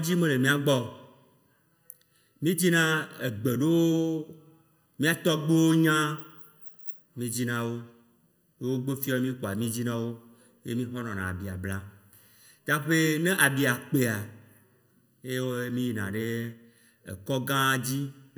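From start to finish the speech sounds hollow and phasey, with a thin, boxy colour that never changes, as if heard through a tube. That is channel delay (comb filtering): one channel arrives a little under a millisecond behind the other, and when the two are folded to mono, the sound they share cancels at evenly spaced frequencies. The first notch falls somewhere around 700 Hz, with further notches repeating above it.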